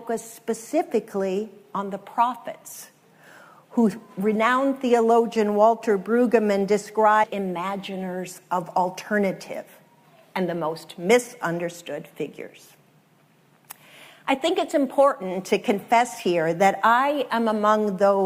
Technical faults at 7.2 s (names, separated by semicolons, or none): stream segment skipped